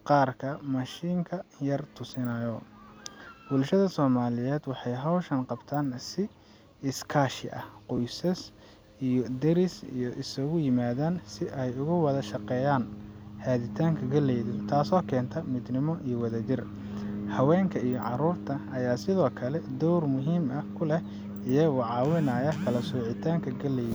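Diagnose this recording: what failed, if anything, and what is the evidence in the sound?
A repeated buffer at 7.97 s, a driver or buffer stage fault: the speech clicks briefly where one 10 ms chunk plays twice, which fits a 10 ms buffer underrun. The waveform shows an identical segment back to back with a hard step; the spectrogram shows a thin vertical broadband line.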